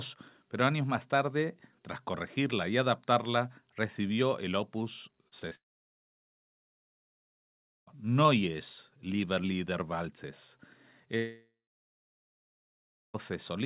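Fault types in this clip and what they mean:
Short concealed packet loss: at 5.28, 5.40 and 5.49 s, gaps of 20 to 40 ms were filled by continuing the preceding sound, giving brief smears or wobbles.
Long network dropout: 5.55 to 7.89 s and 11.17 to 13.16 s fade to silence, likely because packets stopped arriving; the audio resumes with those stretches missing.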